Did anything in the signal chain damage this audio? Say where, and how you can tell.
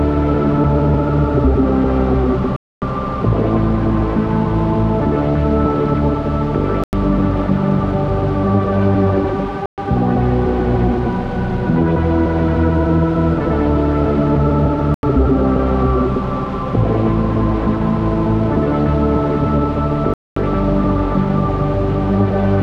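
Yes. The sound drops to dead silence five times, at 2.56 s (256 ms), 6.84 s (92 ms), 9.66 s (121 ms), 14.94 s (88 ms) and 20.14 s (226 ms), then resumes abruptly. On a waveform these are flat silent gaps; on a spectrogram, clean vertical black bands across all frequencies. This is likely a Bluetooth stall on the wireless playback link: retransmissions held back packets, the receiving buffer emptied, and output paused until the data arrived.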